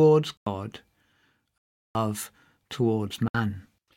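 Blocks of digital silence at 0.37–0.46 s, 1.58–1.95 s and 3.28–3.34 s: the speech drops abruptly to silence, probably from unfilled output buffers.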